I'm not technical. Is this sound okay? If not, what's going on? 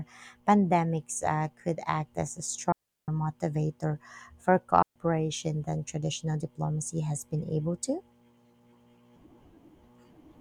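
No. There are two digital wireless dropouts, at 2.72 to 3.08 seconds and at 4.82 to 4.96 seconds. The speech was sent over a digital wireless link, and at those moments too much of the signal failed to arrive. Instead of playing garbled noise, the receiver briefly mutes, so you hear a clean gap of near silence, about a third of a second the first time and about a seventh of a second the second, with no crackle around it.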